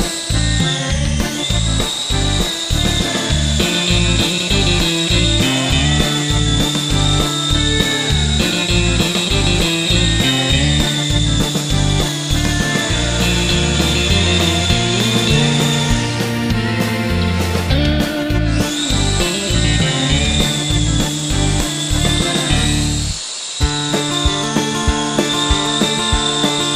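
At 4.33 s to 4.42 s there are frames out of order. Two neighbouring blocks of roughly 46 ms each, which fits runs of two frames of about 23 ms, were decoded in swapped sequence, so that short stretch plays with its two halves exchanged. It sounds like a brief garbled flutter. Unlike a dropout or a repeated frame, nothing is missing or duplicated, and the timing afterwards stays intact.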